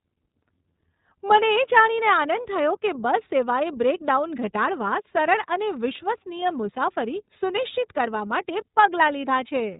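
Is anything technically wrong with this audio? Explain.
Yes. Throughout, the speech sounds muffled and plainly rough and synthetic, from the iLBC codec coding each 30 ms frame independently and passing nothing above 4 kHz.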